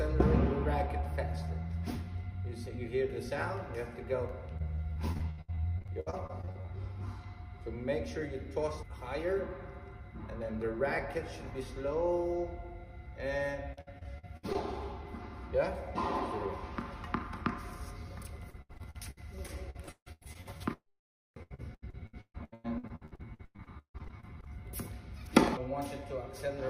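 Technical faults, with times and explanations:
4.57–6.77 s, 13.73–14.56 s, 18.50–24.49 s: repeated packet loss (robotic sound). Gaps up to 156 ms are patched by repeating the preceding sound, making choppy audio with pieces missing that shows as smeared, stuttering bands on the spectrogram.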